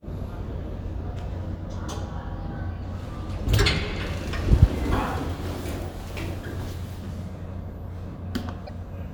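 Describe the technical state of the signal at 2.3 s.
At 2.3 s the signal is intact, with no audible fault at that moment.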